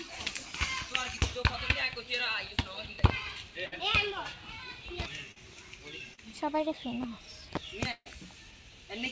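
At 3.66 to 3.74 s, a burst of packet loss leaves the receiver without about 60 ms of audio. It stretches the last sound across the hole for close to 60 ms, fading it as it goes. What should have filled that span is simply skipped, so the sound jumps ahead when real audio returns.

At 5.32 to 5.38 s and again at 6.14 to 6.20 s comes short concealed packet loss. Each time roughly 40 ms arrives too late for the decoder. The receiver bridges the gap by extending the previous sound and then crossfades into the real signal. Each instance is heard as a brief smear or wobble, and a short transient inside the gap can disappear.

From 7.92 to 8.08 s, a larger burst of packet loss takes out about 140 ms. Concealment again carries the last sound forward, fading it for about 140 ms, and about 40 ms drops to silence before playback resumes further along. The result is a held, decaying tail, then a cut and a jump.

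Throughout, the audio sits in a call path whose coding leaves nothing above 8 kHz, which fits a wideband codec such as G.722.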